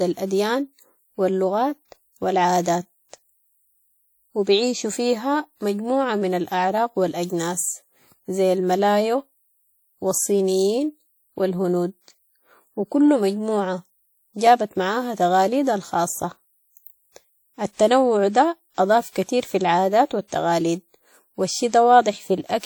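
Speech, with plainly audible coding damage from start to finish: a ringing, washy quality and a hiss that rises and falls with the talker, likely from WMA compression at a low bitrate, which fits about 48 kbps. The transform coder spreads its quantisation noise over long blocks, smearing it tens of milliseconds around each sound. It also drops weak spectral lines, so a spectrogram shows gappy, patchy texture and noise haze around onsets, with content reaching up to about 20.1 kHz.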